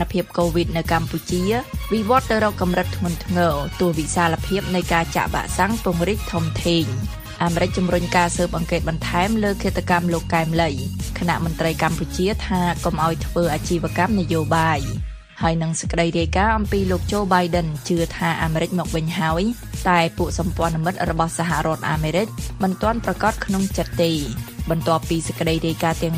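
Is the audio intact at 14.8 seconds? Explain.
No. At 14.82 s there is a single sharp click. It is likely dropped samples: a fraction of a millisecond goes missing, so the waveform jumps abruptly.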